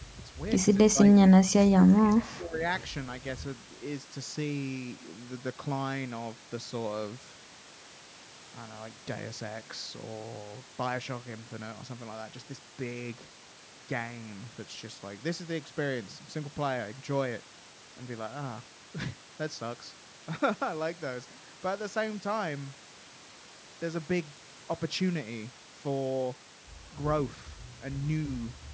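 An echo canceller that likely lost track of both sides talking at once turns the speech down as if it were loudspeaker echo, so this is speech suppressed in double talk. From 0.92 to 0.98 s the level dips briefly by about 10 dB. A longer, deeper cut follows from 1.74 to 2.62 s, pulling the speech down by about 20 dB, so it fades.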